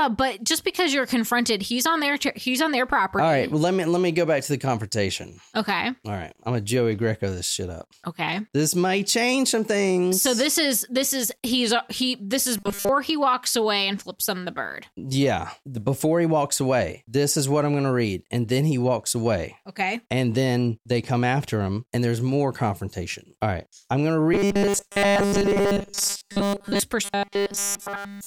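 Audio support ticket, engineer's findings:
Speech turns to a rigid metallic buzz at 200 Hz, 12.57–12.89 s, 24.34–26.80 s (mostly buzz), 27.05–28.26 s (entirely buzz). Robotic sound from repeated short buffers, likely playback underrun replaying a 5 ms buffer in place of skipped audio.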